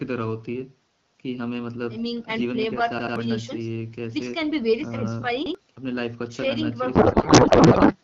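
Repeated buffer, from 2.99 to 3.16 s and again from 5.46 to 5.55 s. New audio did not reach the playback device in time, so it replayed the piece it already held. Each repeat is about 85 ms long, which fits a 4096-sample buffer. At 2.99 s the piece sounds three times in a row, and at 5.46 s it sounds twice. Each has hard joins, heard as a stutter. About 150 ms of speech goes missing at the first event and about 100 ms at the second.

Codec payload misread, from 6.95 to 7.96 s. The AMR frames were packed in octet-aligned format but decoded as if bandwidth-efficient. The decoder therefore read the bits with every field shifted out of place. For that second, the speech is replaced by garbled noise and warble that barely follows it. The effect ends at 7.96 s, once both sides agree on the packing again. The AMR wideband speech before it comes through at 12.65 kbit/s with only light coding damage.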